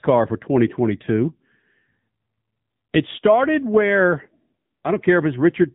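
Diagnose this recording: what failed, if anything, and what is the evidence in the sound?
Throughout, the speech sounds buzzy and synthetic, with nothing above 3.8 kHz: an AMR narrowband mobile codec at the codec stage. The clarity of the damage points to a low bitrate near 8 kbps.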